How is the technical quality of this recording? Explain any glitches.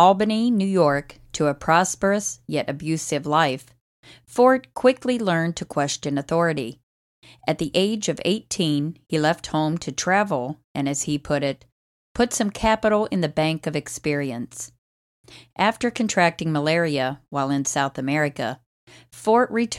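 There are no technical glitches to explain in this speech recording. Nothing in it stands out as a fault.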